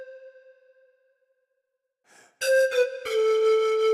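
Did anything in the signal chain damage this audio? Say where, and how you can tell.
No, nothing I can hear points to any stage of the chain having damaged this audio; it sounds fine all the way along.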